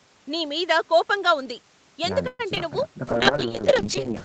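Speech over a call, with three distinct faults. From 2.27 to 2.41 s there is a call audio freeze, likely caused by packets being delayed so the jitter buffer ran dry. The last sound is stretched into a fading buzz for about 0.12 s, ending in roughly 20 ms of silence. Nothing is lost, and the speech resumes exactly where it stopped. Just after, at 2.55–2.58 s and 2.58–2.61 s, come two short concealed packet losses. Each is a brief smear where about 20 ms of real audio never arrived and was patched over. Unlike the freeze, content is actually missing here and no time is added. From 3.08 s to the end, a call bitrate drop takes Opus from 32 to 8 kbps. The speech turns rough and watery as coarser coding sets in for the rest of the clip. This is a lasting change in quality rather than a momentary break.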